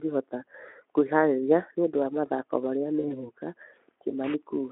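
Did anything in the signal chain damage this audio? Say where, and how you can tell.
Yes. The damage is at the network stage: VoIP packet loss concealed by the speech codec, at 2.99 to 3.3 s. About 40 ms of audio went missing, which fits two lost 20 ms frames. The Speex decoder filled the gap by extending its last pitch and filter with falling gain. That smears the speech into a fading buzz or coloured noise. The recovery lag runs the disturbance to 3.3 s.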